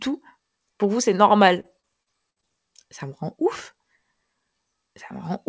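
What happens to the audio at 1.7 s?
Repeated packet loss (robotic sound) runs from 1.60 to 2.44 s, just after "vous c'est": seven short dropouts patched by repeating prior audio, giving choppy speech with pieces missing.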